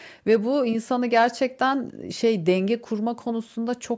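No technical faults can be heard in the speech, which carries the ordinary character of a call's microphone processing, with the lowest bass trimmed away and no content above 8 kHz.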